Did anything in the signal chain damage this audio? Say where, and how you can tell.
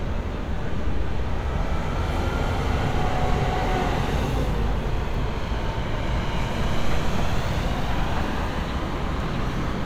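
No, no signal chain damage.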